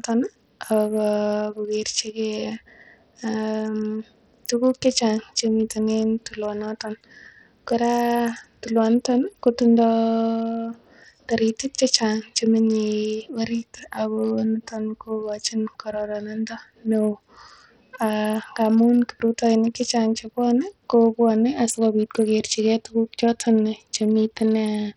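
From start to finish the speech carries heavy damage that sounds like Bluetooth SBC compression, likely from a link squeezed down to a small bit pool, and the coarseness fits something around 64 kbps. With so few bits, the upper sub-bands get starved, so the treble keeps dropping out and flickering back, while the remaining bands are quantised so roughly that a gritty haze and some aliasing ride along on everything.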